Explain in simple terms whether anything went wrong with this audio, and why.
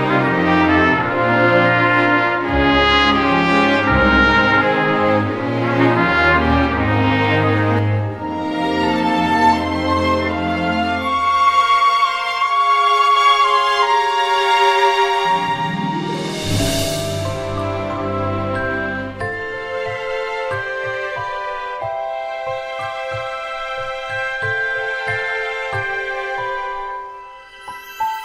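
From 7.79 to 13.16 s the sound turns hollow. This is channel delay (comb filtering): one side of the recording arrives roughly 10 ms late, and when both sides are mixed together, some pitches cancel out, starting around 50 Hz and repeating evenly upward. Unlike a flanger or phaser, the hollowness doesn't sweep or swirl. It stays fixed for that whole stretch and then stops.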